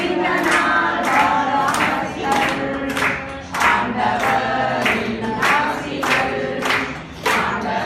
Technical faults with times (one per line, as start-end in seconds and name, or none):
0.00-7.86 MP2 compression